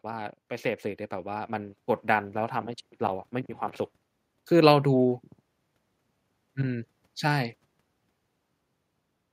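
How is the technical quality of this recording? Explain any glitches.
The level creeps upward at the start. From 0.05 s to about 3.6 s the speech and the room noise behind it swell together, ending up about 4 dB louder than where they began. That is automatic gain rising: the recorder's gain control judged the incoming signal too quiet and turned its gain up slowly over those three and a half seconds, so everything in the signal, background included, lifts at once rather than just the voice.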